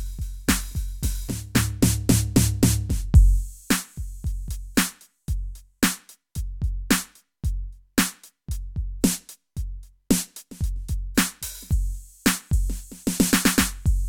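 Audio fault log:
No faults are present in the music. There is nothing to log for any part of the clip.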